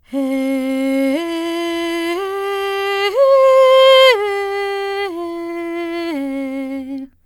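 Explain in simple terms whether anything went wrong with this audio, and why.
Listening to this music, nothing stood out as having gone wrong, so there is no problem to explain.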